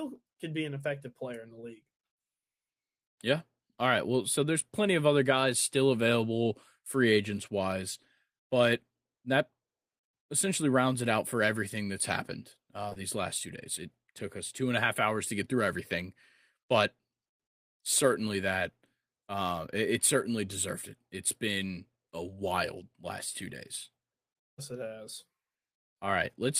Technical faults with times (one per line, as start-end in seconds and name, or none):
12.89-12.97 short concealed packet loss